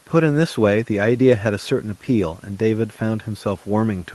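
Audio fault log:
Nothing to log for this speech, which passes through the WebRTC call path as expected, the Opus coding trimming the top end above 12 kHz in a way that fits a bitrate of around 24 kbps.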